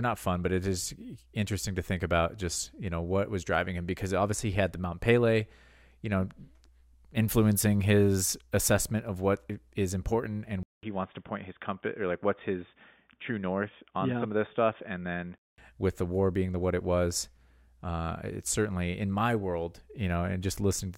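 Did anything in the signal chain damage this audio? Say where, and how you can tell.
Yes. Input switched to a poorer device, 10.63 to 15.58 s: a 200 ms gap, then boxy speech with nothing above 3.6 kHz, likely from a driver-level device change.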